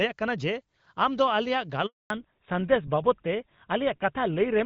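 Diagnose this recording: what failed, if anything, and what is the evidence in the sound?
A handover gap sits in the network stage. At 1.86 s the speech fades out within a few tens of milliseconds. Silence follows until 2.10 s, a gap of 240 ms. The call was passed from one network link to another. No speech frames reached the decoder while the new link came up. Whatever was said in that window never arrived and cannot be recovered.

A fallback to narrowband follows at the same moment, in the codec stage. From 2.10 s to the end, nothing is left above 4 kHz. The speech turns duller and rougher. Before the gap, the HD Voice AMR wideband codec carries energy well above that limit, with only light coding damage, which fits a rate near 12.65 kbit/s. After the handover, the new link is running an older narrowband codec, consistent with GSM full rate at 13 kbit/s, which cannot code anything above 4 kHz.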